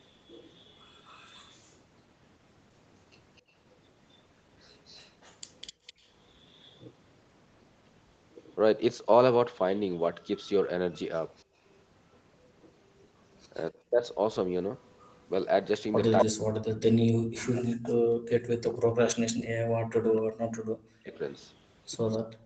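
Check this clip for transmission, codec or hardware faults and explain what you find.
Three call-path faults are present, all tied to echo cancellation on a speakerphone.

Echo leak: 0.0–1.77, 3.36–6.8, 10.94–17.09 and 21.14–22.46 s. A faint copy of the far talker returns 254 ms late, roughly 25 to 30 dB down. The likely cause is residual loudspeaker pickup.

Background gated by the echo canceller: 3.42–3.54 s and 5.73–5.86 s. The room tone suddenly drops, about 23 dB then about 34 dB, as the canceller clamps the microphone.

Speech suppressed in double talk: 13.7–14.02 s and 16.24–22.41 s. With both sides talking, the near voice dips by roughly 40 dB. This is likely the canceller muting both.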